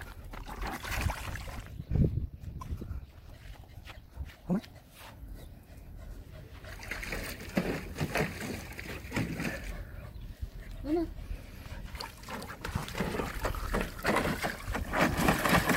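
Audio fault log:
0.0–4.78 s, time-stretched section: rushed at 1.83 times normal pace with pitch unchanged, likely from software squeezing the audio by dropping short pieces.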